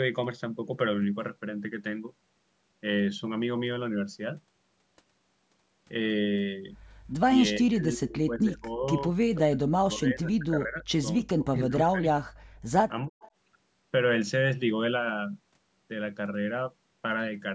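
Speech on a call where the echo canceller likely mistook simultaneous talk for loudspeaker echo, causing speech suppressed in double talk: the voice drops by roughly 25 to 40 dB at 7.56–8.85, 9.35–10.84, 11.22–12.27 and 13.08–13.17 s. Residual loudspeaker pickup then likely escapes cancellation as an echo leak, a faint copy about 25 dB down and 342 ms late, at 13.2–13.31 s.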